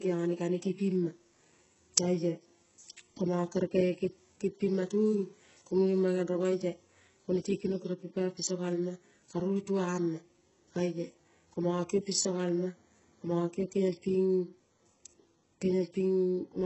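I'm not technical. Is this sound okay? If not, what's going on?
No. All the way through, the speech has a gritty, metallic edge, and the s sounds come out lispy or smeared. This is likely HE-AAC compression at a very low quality setting. That kind of squeezing keeps only the lower part of the sound and then fakes the treble by copying lower tones upward. A plain muffled recording just sounds dull. Here the top still sounds bright, but artificial, and nothing real remains above about 7.9 kHz.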